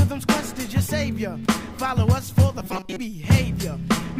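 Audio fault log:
2.60 to 3.00 s, robotic sound from repeated short buffers. The sound turns into a rigid, metallic buzz at 188 Hz for 0.4 s. It still roughly tracks the shape of the audio around it. The likely cause is new audio arriving too seldom, so playback loops its last few milliseconds to fill the gap. A 188 Hz buzz fits a repeat of about 5.3 ms. Most of the real audio in this stretch is skipped.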